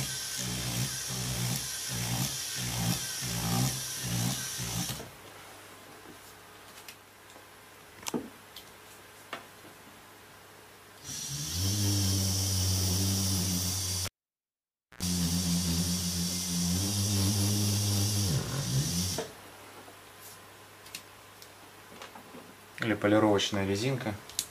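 At 14.05 s a sharp pop cuts the sound to near silence for about 0.93 s. A short 60 Hz buzz of about 87 ms follows, and a second pop at 15.03 s brings the sound back. This is a cable pulled and plugged in while live. The first pop is the contact breaking. The hum comes from the plug's tip touching before the ground connects, which lets mains interference leak in, and the final pop is the full contact re-seating.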